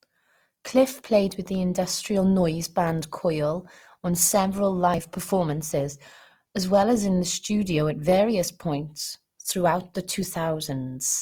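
Throughout, the speech sounds rough and grainy: likely Opus compression in CELT mode, at a rate fitting about 24 kbps. Starved bands are noise-filled, so a spectrogram shows speckled texture with few holes, ending at 20.5 kHz.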